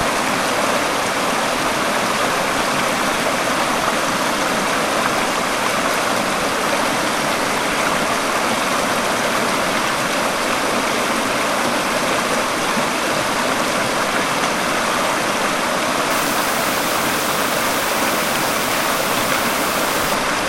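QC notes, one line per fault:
16.11 to 20.14 s, low bit depth with dither: a steady, even hiss comes up and sits only around 10 dB under the sound, with no gritty distortion riding on it. That's what happens when the audio is rounded to very few levels with dither added first. The rounding error gets scrambled into flat white noise instead of harsh artefacts that follow the signal. The noise level fits roughly 5-bit resolution.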